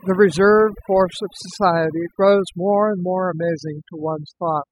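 Throughout the speech, overdone noise removal is audible. A noise reduction stage was set far too strong. It cuts individual frequency bands near its noise estimate, taking quiet parts of the voice too. The background drops and breaks up into twinkling specks.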